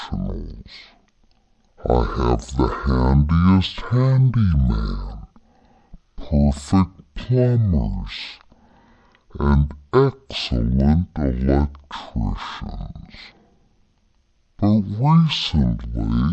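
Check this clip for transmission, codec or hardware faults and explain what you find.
There's one fault, and it runs the whole way through: a wrong sample rate. The speech plays at half speed and a full octave (12 semitones) low, so everything sounds slow, heavy and dragged out. That fits audio recorded at 44.1 kHz being played back at about 22 kHz without conversion, which stretches time and drops pitch together.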